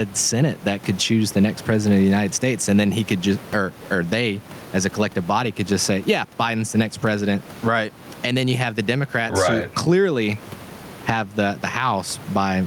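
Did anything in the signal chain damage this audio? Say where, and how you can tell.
Yes. Gain pumping runs throughout: room noise about 28 dB below the speech swells in pauses and ducks by roughly 15 dB under each loud sound. This is likely microphone gain set far too high, with a fast call-processing limiter. The waveform shows flattened peaks and a noise floor rising between phrases.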